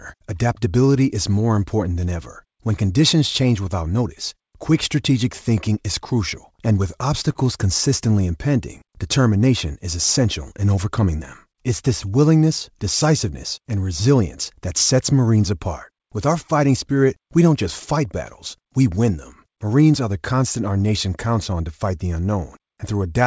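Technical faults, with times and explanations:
7.32 to 7.37 s, short stall from a late packet: the jitter buffer ran dry, so the last sound was stretched 30 ms with nothing lost.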